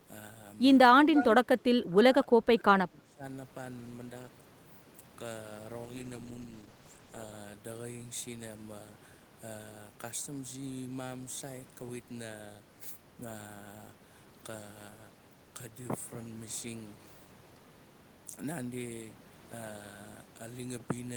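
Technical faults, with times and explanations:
1.05–1.26 s, echo leak: a faint delayed copy of the speech returns about 303 ms late, roughly 10 dB down. The far end's echo canceller likely missed loudspeaker pickup.
1.44–3.23 s, speech suppressed in double talk: the speech dips by up to roughly 20 dB, for around one and a half seconds in total. Both sides likely talked, and suppression caught the talker.
5.85–7.41 s, call bitrate drop: the encoder falls from 32 to 14 kbps, lowest for 1.5 s. Coarser coding makes the speech rough and muffled until it recovers.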